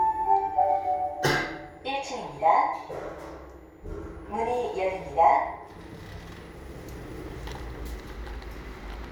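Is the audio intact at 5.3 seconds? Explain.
Yes, the audio at 5.3 seconds is intact, with no dropout, click, distortion or other fault at that moment.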